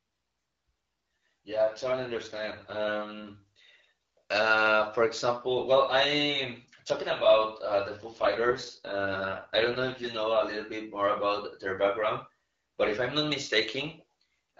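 From 1.56 to 3.28 s, and again from 7.97 to 10.08 s, there is an AMR rate drop. The AMR-WB (HD Voice) speech turns rough and synthetic, with no gap and no narrowing of the band, then clears when the rate recovers. The change from the light codec colouring elsewhere fits a step down from 12.65 to 6.6 kbit/s, where the codec spends bits on error protection instead of detail.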